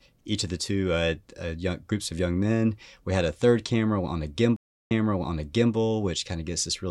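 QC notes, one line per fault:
4.56–5.73 s, stream reconnect. Right after "third camera on a", the audio drops to silence for 334 ms. The connection broke, and the player stopped until it reconnected. It then started a new decoder partway into the stream. The server resent recent audio, so playback resumes 832 ms earlier than where it cut off. The listener hears that stretch of speech repeated. The restart fades in because the decoder starts cold with no carried-over state.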